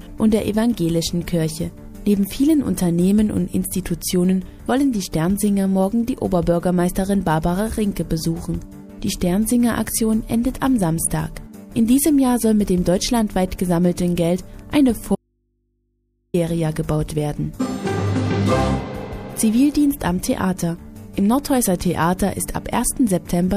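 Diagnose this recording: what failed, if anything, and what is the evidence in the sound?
An audio dropout to a faint residue runs from 15.15 s to 16.34 s, about 1.19 s of lost signal. The sound cuts off abruptly and returns just as suddenly, with no fade either side. In the gap only mains hum remains, roughly 50 dB below the programme level. The stage is likely the analogue wiring, an intermittent connection or open input, where the feed broke but the downstream path stayed live and picked up hum.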